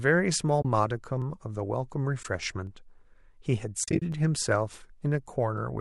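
At 0.62 s the audio drops into a short, soft-edged hole lasting about 30 ms, which fits three lost 10 ms frames. This is AAC frame loss with muting. The decoder zeroed the missing spectrum, and the overlapping windows fade the sound out and back in. On a spectrogram it shows as a narrow vertical blank band across all frequencies. In the waveform the envelope tapers to silence and recovers.

From 1.22 s, regular clicks begin, recurring every 1.45 s through about 5.58 s, roughly four in all. These are clock drift buffer slips, likely from two devices whose clocks differ by around 500 ppm, so a block of about 30 samples is dropped or repeated each time. Each slip appears as a thin full-height vertical line on a spectrogram and as a discontinuity in the waveform.

More frame-loss muting follows at 2.23 s, a 20 ms gap. From 3.84 to 4.02 s there is a scattered cluster totalling 120 ms over about 180 ms, with its longest gap around 40 ms. 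This cluster gives a fluttering, stuttering dropout made of several blank stripes close together.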